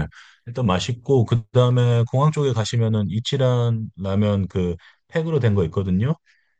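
From 2.71 s to the end, one channel arrives a couple of samples behind the other, only a few hundredths of a millisecond, and the two are summed to mono. That tiny offset produces channel delay (comb filtering): content shared by both channels cancels at evenly spaced frequencies, with the first notch around 10 kHz. The speech loses its airy top end and sounds slightly dull and veiled from that point on.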